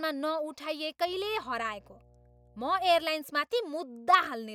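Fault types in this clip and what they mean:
Mains hum: Power-line current leaks into the signal, through a ground loop or a nearby transformer. Here a steady 60 Hz tone sits under the speech from 1.07 to 3.04 s. It runs roughly 30 dB below the speech.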